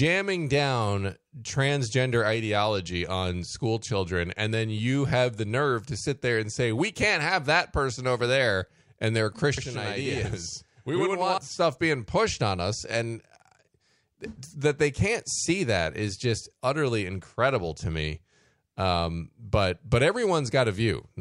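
From 9.58 to 11.38 s the speech is doubled, with a distinct slap echo trailing each syllable by about 85 ms at equal level. This is channel delay (doubling): one channel ran late, which fits a 4096-sample buffer, and was then summed to mono.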